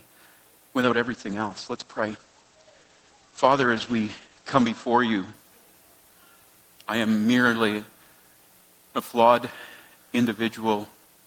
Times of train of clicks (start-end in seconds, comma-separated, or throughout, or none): none